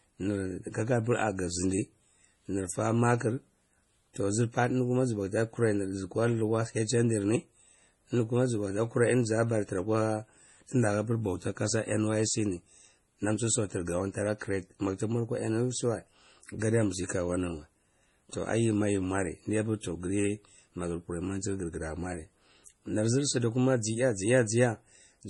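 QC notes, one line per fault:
Throughout: MP3 compression, likely from an encoder starved of bits, which fits a 32 kbps stream. It removes everything above 11.4 kHz and drops weak spectral detail from frame to frame, so the speech sounds dull, watery and swirly, with heavily smeared attacks.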